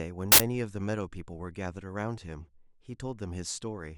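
At 0.32 s the speech is interrupted by an uninitialised buffer, lasting until 0.40 s. For that 80 ms stretch the playback path output a block before any audio had been written into it, so whatever data remained in memory was read out as if it were samples. The result is a short, loud burst of harsh digital noise with no relation to the surrounding speech, cutting in abruptly and stopping just as abruptly.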